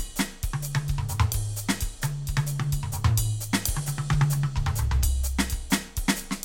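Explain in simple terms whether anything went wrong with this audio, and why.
Nothing went wrong with this music audio, so there is no fault to explain.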